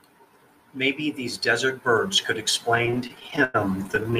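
From 2.75 s to the end at 4.19 s the speech drags and stutters, with the last sound held or faded across about a quarter of that span. These are repeated stalls (stutter): late packets kept draining the jitter buffer, leaving 26 gaps up to 101 ms each.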